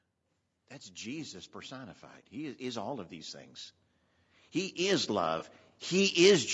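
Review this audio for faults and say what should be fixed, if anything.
The speech has a rough, grainy texture throughout, with noise filling the gaps between pitch harmonics, which likely comes from low-delay AAC compression, AAC-ELD at around 32 kbps. Its short frames resolve harmonics poorly. Unlike band-limiting, which only dulls the sound, this adds grit. Raising the bitrate would prevent it.

Automatic gain rising lifts the voice and background together by about 8 dB from 0.53 to 3.45 s, and by about 4 dB from 4.53 to 5.53 s. The gain control judged the input too quiet and ramped up slowly. Unlike a speaker moving closer, the background swells along with the voice. Setting a proper input level, so the control has less to correct, would prevent it.

AAC frame loss with concealment leaves a brief smeared, noisy patch from 5.39 to 5.43 s, where about 20 ms of audio was lost. The decoder rebuilt it from the previous spectrum. 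A dropout would instead leave silence or a click. Forward error correction or a larger jitter buffer would prevent it.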